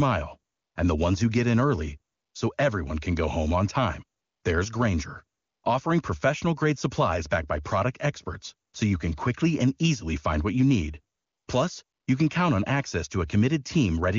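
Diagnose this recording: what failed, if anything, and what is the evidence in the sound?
AMR comfort noise, from the codec's discontinuous transmission. Short pauses switch to smooth, steady synthetic noise at 0.53–0.75, 2.13–2.33, 4.19–4.43, 5.39–5.63, 8.69–8.73, 11.15–11.47 and 11.83–12.07 s. Speech frames stopped. The receiver rebuilt the background from a coarse level and spectrum.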